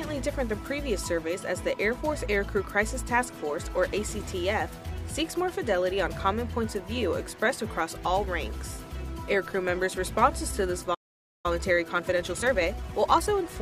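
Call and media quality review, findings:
Playback stall, 10.94 to 11.46 s: output drops to silence for about 0.5 s mid-flow, then resumes. Likely player buffer underrun or blocked audio thread. Waveform shows a flat silent gap; spectrogram shows a clean vertical blank band.

Time-compressed catch-up, 11.46 to 13.44 s: audio runs hurried at 1.25x with pitch unchanged. Player trimming backlog by splicing and cross-fading short segments. Spectrogram shows compressed event spacing.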